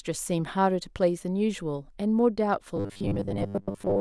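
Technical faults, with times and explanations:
2.77 to 4.01 s, robotic sound from repeated short buffers: from 2.77 s to the end, the speech hardens into a rigid, metallic buzz pinned at 100 Hz, though it still loosely tracks the talking. The likely cause is audio reaching the player too seldom, so a 10 ms slice is looped to cover the gaps, most of the time in this stretch, while real audio is dropped. The fixed 100 Hz drone, ignoring natural pitch movement, separates it from ordinary crackle or dropouts.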